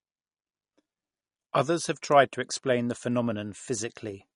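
Throughout the speech there is plainly audible MP3 compression damage, and the bandwidth stops dead at about 10.6 kHz with nothing above it. That hard ceiling comes from the encoder discarding the treble to save bits. Weak frequency components flicker in and out between frames, giving the speech a watery, swirling texture and smeared onsets. The combination of cutoff and artefact level points to a low bitrate, likely around 40 kbps.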